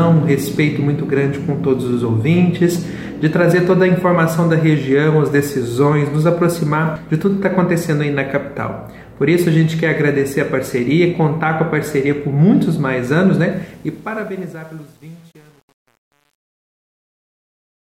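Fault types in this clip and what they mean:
Truncation distortion on a fade: the fade-out starting near 13.5 s loses smoothness because the gain stage rounds off without dither, which fits an 8-bit path. From about 14.1 s to the end the tail goes gritty and stepped.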